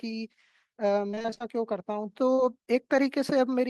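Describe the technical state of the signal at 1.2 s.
At 1.2 s the speech turns choppy, with pieces missing. This is repeated packet loss, running from 1.07 to 1.42 s. Nine short dropouts, none longer than 25 ms, arrive in quick succession. Each hole is covered by stretching the sound just before it, and about half of that stretch is patched this way. Those repeated fills replace real signal, which produces the choppy quality.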